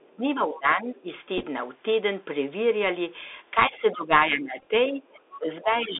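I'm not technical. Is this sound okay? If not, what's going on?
No, it has a few problems. The whole clip comes through the Bluetooth CVSD headset codec, the basic headset link: the sound is muffled, with nothing above about 3.6 kHz, plus a scratchy edge and a grainy hiss.

From the start to 1.09 s, from 3.54 to 5.15 s, and again from 5.39 s to the end, the speech dips and thins out. That's speech suppressed in double talk, likely the echo canceller turning everything down while both people talked at once.

Around 1.38 to 1.45 s and 4.60 to 4.67 s there's a brief buzzy stutter. That's a Bluetooth headset packet repeated: bits of sound went missing, and the headset replayed the last piece to fill the gaps.

At 5.32 to 5.38 s, a faint scrap of another voice slips in. That's the other side's voice leaking through, likely from a loudspeaker the echo canceller didn't fully remove.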